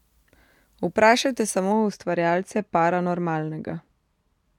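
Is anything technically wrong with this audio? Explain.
Yes. From 1.72 s to the end, de-emphasis is applied wrongly. A treble cut slopes down smoothly, about 13 dB at 10 kHz. The speech turns dull and muffled.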